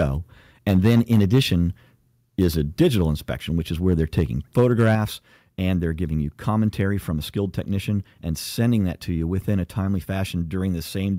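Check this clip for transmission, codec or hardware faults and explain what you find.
Two hardware-side faults are present: repeated clipping of the speech peaks, then a sudden drop in input level.

Microphone overload, at 0 to 0.02 s, 0.68 to 1.54 s, 2.4 to 3.02 s (just before "inspection which is"), 3.87 to 4.23 s (just after it) and 4.58 to 4.95 s. The likely cause is input gain set too high, so peaks run about 3 to 5 dB past the converter's ceiling. A few percent of samples get flattened, giving loud syllables a harsh, crackly edge.

Microphone volume stepped down, at 4.95 s, right as the last clipped stretch ends. Level falls by about 4 dB in a single step, likely the call software cutting the device's input gain after detecting overload, so everything afterward sounds abruptly quieter.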